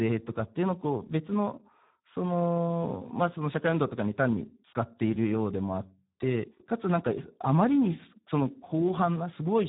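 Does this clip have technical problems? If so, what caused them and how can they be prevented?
Yes, the whole speech clip carries heavy Speex codec damage. The voice sounds hoarse and noisy, and nothing survives above 3.8 kHz, which fits Speex at around 8 kbps starving the excitation of bits. To prevent it, raise the Speex quality setting or switch to a modern codec like Opus.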